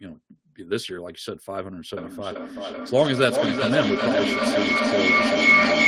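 Speech, with feedback howl from 1.97 s to the end at 5.87 s. A tone near 2 kHz builds, with the loop repeating roughly every 0.4 s. It peaks about 8 dB above the speech. Two devices in one room share the call, and their microphone-loudspeaker loop keeps gaining.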